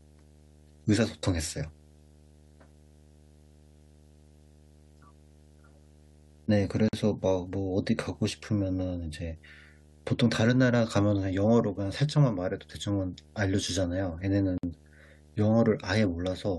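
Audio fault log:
Throughout: video or display buzz. A screen or video cable is coupling into the speech path, laying a steady buzz at the 75 Hz field rate under the whole clip, with a band of hash riding above it. The buzz sits roughly 30 dB below the speech. The 75 Hz fundamental points to a display refreshing at that rate rather than to mains hum.
6.89 to 6.93 s and 14.58 to 14.63 s: gap at a join of encoded pieces. The speech stops dead for 47.3 ms at the first point and 53.9 ms at the second, then resumes exactly where it left off. Each gap comes from two separately encoded segments butted together untrimmed, leaving the encoder's start-up delay and final-frame padding in place as silence. The codec smears the edges.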